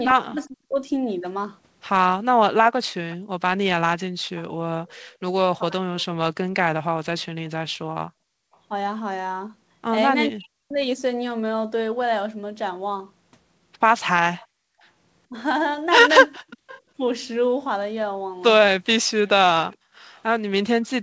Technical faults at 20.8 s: echo leak

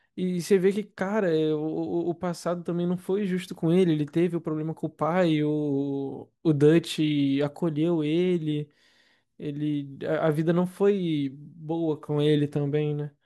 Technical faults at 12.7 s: none

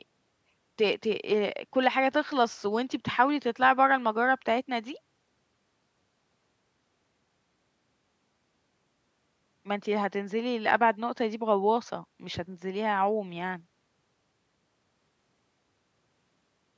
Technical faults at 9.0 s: none

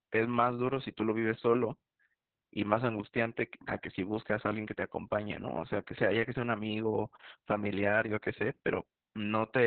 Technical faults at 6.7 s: Opus voice compression

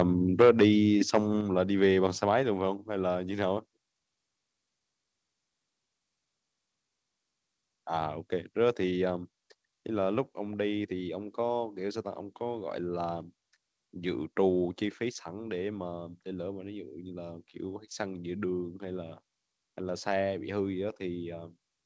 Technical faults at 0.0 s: microphone overload

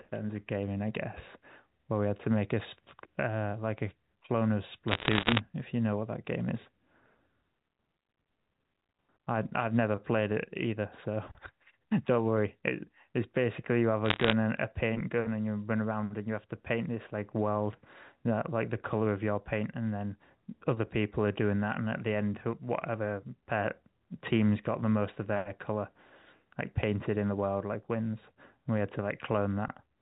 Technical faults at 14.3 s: bit errors on a digital phone line

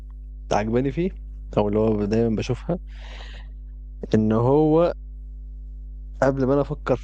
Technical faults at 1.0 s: mains hum

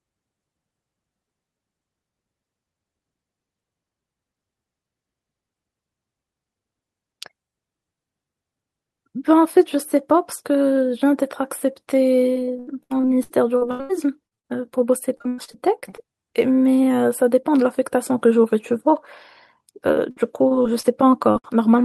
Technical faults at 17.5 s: none

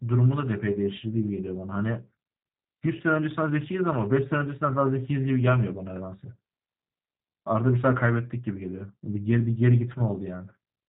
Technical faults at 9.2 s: G.729 codec

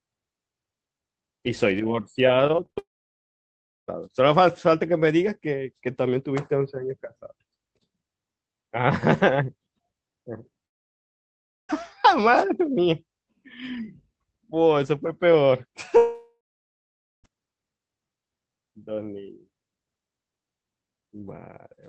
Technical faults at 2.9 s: long network dropout

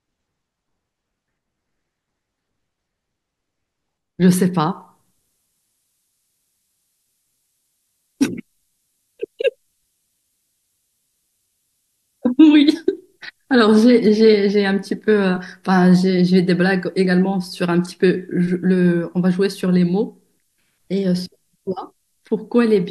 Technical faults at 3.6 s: none

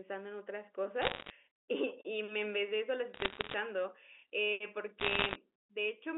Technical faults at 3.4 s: bit errors on a digital phone line

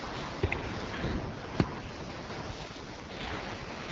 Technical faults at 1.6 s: none

